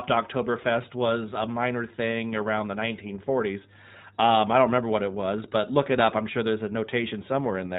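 From start to finish the speech carries iLBC codec damage: nothing above 4 kHz, leaving an empty spectrogram band overhead, and a rough, synthetic texture, which fits 15.2 kbps coding in 20 ms frames.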